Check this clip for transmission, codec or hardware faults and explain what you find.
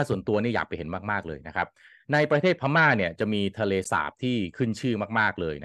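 There's one codec fault in the speech, a corrupt frame decoded at 3.83 to 3.87 s. For roughly 40 ms, about a couple of compressed frames' worth, some bits in the stream got flipped and the decoder played them anyway. The misread gains and codes dump energy into the wrong frequencies, so you get a short chirpy, noisy blip laid over the speech. It peaks somewhere around -25 dBFS.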